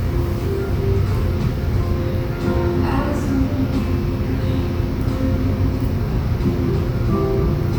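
Nothing goes wrong anywhere in this recording of sounds, so there's no technical fault to point to.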